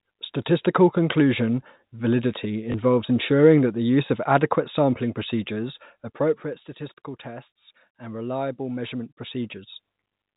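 This speech clip, carried over narrowband telephone coding, has two kinds of fault. At 2.72 s, just after "conclusion validity", one 20 ms packet goes missing. The receiver repeats the previous packet in its place. That single repeat is heard as a small blip. Zipper noise appears from 5.72 to 6.72 s, after "use of adequate sampling", as the level falls by about 10 dB. It returns from 8.8 to 10.08 s, after "tests and reliable", as the level rises by about 10 dB. Each time, the gain moves in coarse unsmoothed steps, around 30 a second. Every step clicks, so a fine ticking rides on the speech while the level changes.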